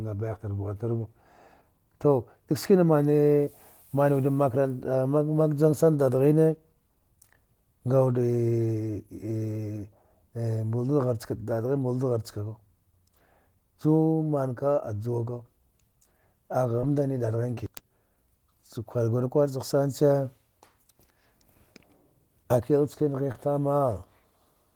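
Speech, with four brief moments of short concealed packet loss at 3.45, 16.81 (just before "dadghin ki"), 17.54 and 23.32 s (just after "akil chkana"). About 20 ms of audio went missing each time, and the decoder papered over it by extending the previous sound before blending back, so each gap comes across as a quick smear or wobble.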